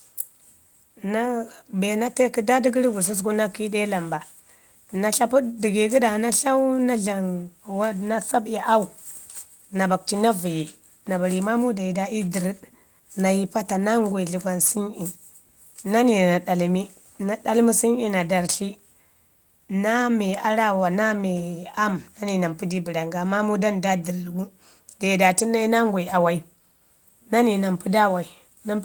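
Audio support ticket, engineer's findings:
No audible faults found in this speech recording.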